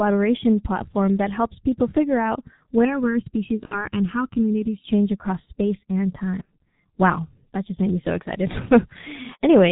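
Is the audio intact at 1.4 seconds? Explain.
No. At 1.4 seconds the speech carries G.723.1 codec damage, and that damage runs through the whole clip. This codec squeezes speech into 30 ms frames at a very low rate. The sound fits something near 6 kbit/s. It discards everything above 4 kHz. Its model of the voice updates only slowly. The damage here is heavy. At this moment the speech sounds muffled and hoarse. Consonants lose their edges and blur together.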